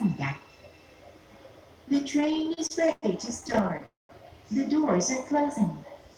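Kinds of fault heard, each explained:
Repeated stalls (stutter): The jitter buffer kept running dry, so the sound was held and restarted 14 times between 2.11 and 3.04 s (longest hold 107 ms) and 10 more times by 3.84 s. Unlike a single freeze, it drags and stutters in short hitches, with nothing lost.
Call audio freeze: One continuous hold from 3.86 to 4.11 s, where the last sound was stretched for about 230 ms and faded into roughly 170 ms of silence. Its likely cause is packets delayed in transit. It differs from the stutter by being one longer gap rather than many brief ones.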